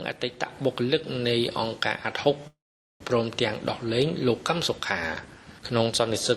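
Delayed packets likely drained the jitter buffer, causing a call audio freeze from 2.47 to 3.02 s: a fading buzz, 0.43 s of silence, then resumption with nothing lost.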